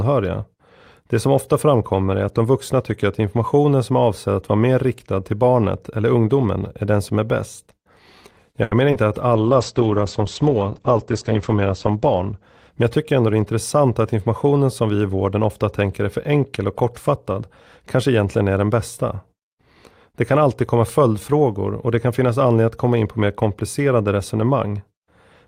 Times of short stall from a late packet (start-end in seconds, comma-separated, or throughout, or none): 8.63-8.73